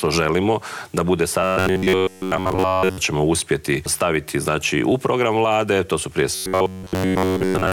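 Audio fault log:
1.42–2.99 s and 6.33–7.72 s, robotic sound from repeated short buffers: a rigid 93.8 Hz buzz, likely from a roughly 10.7 ms segment replayed in place of most missing audio.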